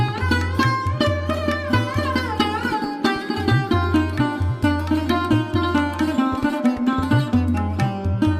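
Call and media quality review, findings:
No audible faults found.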